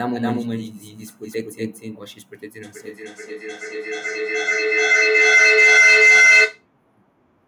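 From the start until 2.04 s, the speech has a doubled audio track. An equally loud, dry copy trails about 0.3 s behind, likely from a second, slower capture path. From 2.63 s to 6.67 s, a feedback howl builds near 2 kHz as a microphone-to-loudspeaker loop gains level. It pulses roughly every 0.4 s and peaks about 12 dB above the speech.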